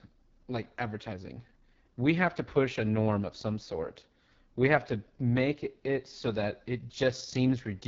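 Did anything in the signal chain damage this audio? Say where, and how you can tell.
Yes. The damage is at the codec stage, from the AMR wideband (HD Voice) codec, across the whole clip. The speech is rough and raspy, with nothing above 7.4 kHz, which fits AMR-WB's lowest mode, about 6.6 kbit/s. A plain low-pass would not add this; the 6.4 to 7 kHz band here is shaped noise, not harmonics.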